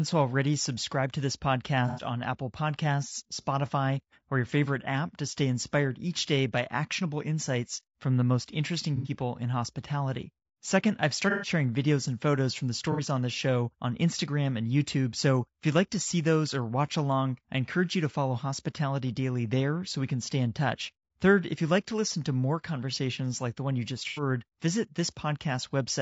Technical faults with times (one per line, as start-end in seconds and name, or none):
0.00-26.01 low-delay AAC compression
1.88-2.02 AAC frame loss with concealment
8.96-9.10 AAC frame loss with concealment
11.30-11.50 AAC frame loss with concealment
12.92-13.01 AAC frame loss with concealment
24.08-24.22 AAC frame loss with concealment